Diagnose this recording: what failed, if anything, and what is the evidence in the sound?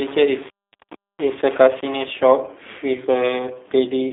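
G.729 codec damage throughout the speech: nothing above 3.7 kHz, thin lows below 250 Hz, and a rough, synthetic texture. This fits an 8 kbit/s codec stage rebuilding each 10 ms frame from a vocal tract filter, pitch predictor and sparse pulses.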